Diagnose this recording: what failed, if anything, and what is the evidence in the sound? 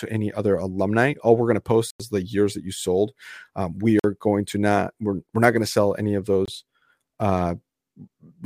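Blocks of digital silence point to a driver or buffer underrun. Hard dropouts land at 1.90 s (93 ms, after "we're going to"), 3.99 s (46 ms, before "going to not we're") and 6.46 s (23 ms, after "to sell any of"). The lengths halve, fitting 4096-, 2048- and 1024-sample buffers left unfilled.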